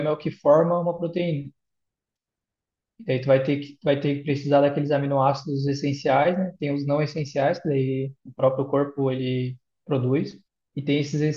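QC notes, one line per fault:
Nothing to flag here, the speech comes across fine with no problems heard anywhere along the way.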